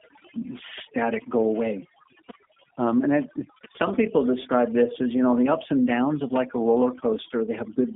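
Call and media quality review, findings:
Background dropped and broken into twinkling specks, throughout. Overdone noise removal: bands near the noise estimate gated down, dragging quiet voice detail with them.

Slightly rough, synthetic voice, band-limited to about 200 Hz to 3.5 kHz, nothing above 3.6 kHz, throughout. G.729 codec (G.729A), damage plainly audible; the sound fits an 8 kbit/s stream rebuilt from filter and pulse model.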